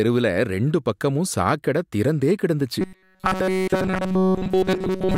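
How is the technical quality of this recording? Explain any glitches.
The recording breaks down partway through: from 2.81 s to the end, after "பக்கமும் சாக்கடை திறந்தே கிடந்துச்சு", the speech takes on robotic sound from repeated short buffers. The likely cause is audio arriving too slowly, so playback keeps looping a tiny slice of about 5.3 ms instead of the real signal. Essentially all of that stretch is repetition, imposing a steady 188 Hz buzz, so the speech becomes a flat, metallic drone that only loosely tracks the syllables.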